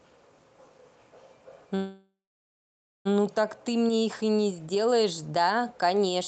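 At 1.75 s the speech stalls: the last sound smears into a fading buzz, then about 0.89 s of silence, and at 3.07 s it resumes exactly where it stopped. This call audio freeze is likely from delayed packets draining the jitter buffer, inserting a 1.3 s gap.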